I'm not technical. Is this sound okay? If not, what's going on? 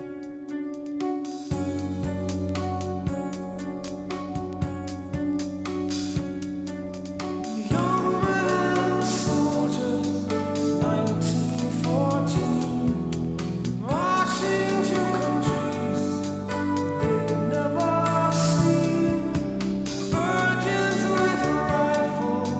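Yes, nothing is wrong: the top end stops at about 8 kHz, which is normal for audio sent through a call's microphone processing and Opus codec.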